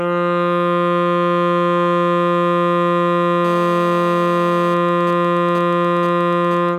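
From 3.45 to 4.74 s, a nearby 2G handset in an active call is transmitting its radio bursts about 217 times a second, and something in the audio chain is rectifying those pulses into the signal. The result is GSM phone buzz: a hard, raspy 217 Hz drone with a dense stack of harmonics, sitting about 19 dB below the music and bearing no relation to it, nearly steady through the stretch.

From 4.77 to 6.69 s, the same call carries on with its talker silent, so the handset sends only sparse groups of bursts, still at a 217 Hz rate. The circuitry demodulates these as well, giving GSM signalling bursts: even ticks with a longer 217 Hz buzz twice a second, at roughly 20 dB under the music. The interference is chopped and rhythmic instead of continuous.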